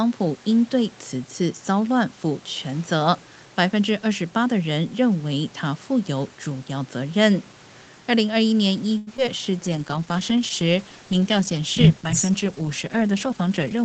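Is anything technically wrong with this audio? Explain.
Yes. Several network and jitter buffer faults cluster in the second half of this speech clip.

From 8.97 to 9.09 s there is a short stall from a late packet. A packet arrived late, so the receiver held the last sound for about 95 ms. It sounds drawn out, with a faint buzz.

Short concealed packet loss follows at 9.17 to 9.20 s and 9.26 to 9.29 s. The receiver filled each brief gap by extending the preceding sound. Each one is heard as a quick smear or wobble.

From 9.45 to 9.69 s a jitter buffer slow-down repeats small pieces of audio to rebuild its reserve. Speech runs at about 86% speed, at unchanged pitch.

From 9.65 s to the end there is a call bitrate drop. The encoder was starved of bits, and the coarser sound fits a fall from 32 kbps to roughly 10 kbps. The audio turns rough and watery.

From 13.11 to 13.83 s a jitter buffer speed-up trims short pitch periods to cut the delay. 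About 50 ms is removed, so speech runs slightly hurried, near 106% speed.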